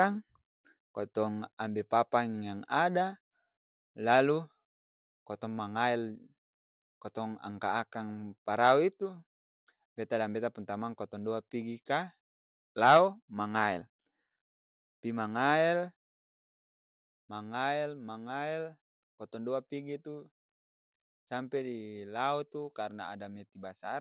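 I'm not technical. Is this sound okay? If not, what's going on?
No. Microphone overload likely happened: the microphone was set too loud, so the loudest moments hit its ceiling and had their tops sliced off. You hear this as a brief harsh crackle at 0.01 to 0.03 s, 8.64 to 8.72 s and 12.84 to 12.97 s.

Right after that last crackle, at about 12.97 s, the microphone volume stepped down, likely because the call software noticed the overload and turned the input lower in one go. The speech and background suddenly become slightly quieter from that point.

The audio came through a phone-style call connection, which keeps nothing above 4 kHz, so it has that narrow, telephone-like sound.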